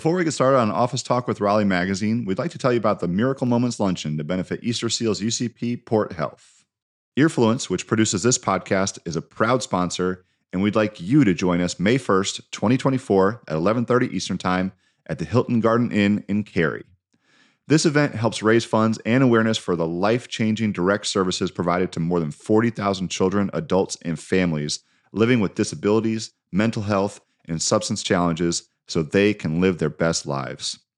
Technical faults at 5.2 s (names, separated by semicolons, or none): periodic USB or driver dropouts